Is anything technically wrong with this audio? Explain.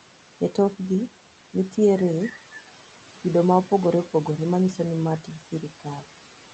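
Yes, there are two faults.

Noise suppressor artifacts run through the whole clip. The suppressor pushes down the bands it treats as steady noise, by about 11 dB, frame by frame. The room noise, about 16 dB below the speech, dips between phrases and returns underneath them.

Speech cut by the noise suppressor occurs between 5.52 and 6.05 s. The suppressor mistakes parts of the speech for background and pulls them down with it, by up to about 11 dB. Roughly a tenth of a second in total sounds swallowed and faint.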